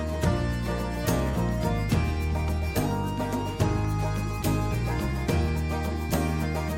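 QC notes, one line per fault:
3.85 s and 5.93 s, dropped samples: two single sharp clicks in the music, likely from a fraction of a millisecond of samples missing, making the waveform jump abruptly.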